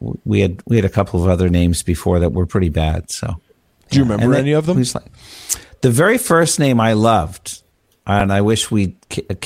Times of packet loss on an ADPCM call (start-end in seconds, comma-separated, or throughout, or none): none